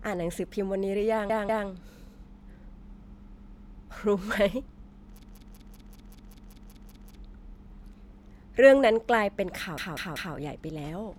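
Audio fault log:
1.30–1.68 s, 3.38–3.76 s, 5.23–7.15 s, 9.78–10.35 s: repeated frames. A 192 ms block replays identically two, two, ten and three extra times, stretching the audio rather than leaving gaps.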